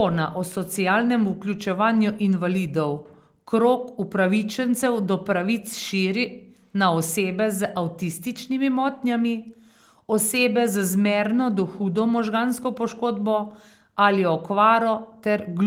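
There are no technical faults to describe in time order in this speech clip.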